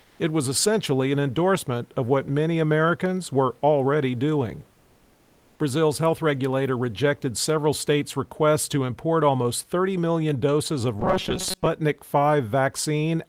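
From 0.01 to 0.19 s, the opening background is replaced by comfort noise: a flat, featureless hiss about 1 dB quieter than the real room noise, which sits about 39 dB below the speech. This is likely discontinuous transmission, with the receiver filling the pause with synthetic noise.

From 11.00 to 11.67 s, just after "million doses of", the speech takes on a robotic sound from repeated short buffers, a rigid metallic buzz at 188 Hz. This points to a roughly 5.3 ms block being replayed, with roughly half the audio repeated instead of new.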